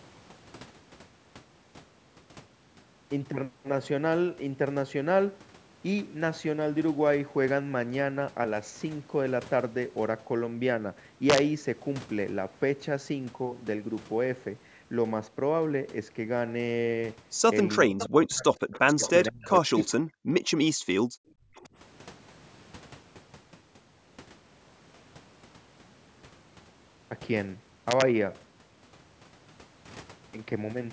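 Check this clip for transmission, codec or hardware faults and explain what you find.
Yes, there are four kinds of fault in this speech clip: two integer-overflow bursts, and a cluster of echo-canceller problems between about 17.9 and 21.7 s. The band stops at 8 kHz, which is the call's microphone processing and not a fault.

Integer overflow occurs at 11.30–11.38 s and again at 27.91–28.02 s. The loudest peaks went beyond the largest representable sample value, by about 4 dB and about 2 dB respectively. Instead of being held at the limit, they wrapped around to the opposite extreme. You hear harsh cracks that are far sharper than clipping. On a waveform, the peaks flip sign abruptly in a single step. On a spectrogram, they show as bright broadband vertical lines.

Speech suppressed in double talk runs from 17.89 to 20.3 s, affecting roughly a second in total with drops near 40 dB. A shorter stretch follows at 21.42–21.69 s, with drops of roughly 30 dB. 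The likely cause is both sides talking at once, so the echo canceller attenuated the near talker along with the echo. The voice dips, thins out and breaks into fragments. On a spectrogram, the harmonics fade or vanish in patches, and the waveform envelope collapses in chunks.

Echo leak appears as short delayed copies of the voice at 17.99–18.06, 18.72–19.11, 19.83–19.93 and 21.55–21.63 s. Each arrives 470 ms after the original, at levels from about 15 dB down to about 35 dB below the speech. This is likely loudspeaker pickup that the canceller failed to remove fully. The copies sound faint. A spectrogram shows weak repeats of the speech pattern shifted 470 ms later.

Background gated by the echo canceller occurs at 20.75–21.14 s, about 200 ms in total, with the room sound dropping by up to about 39 dB. The canceller clamped the microphone down hard while the loudspeaker was active, so the ambience briefly disappears and then returns. 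On a spectrogram, the noise floor shows a dark gap. On the waveform, the low-level background flattens to near silence.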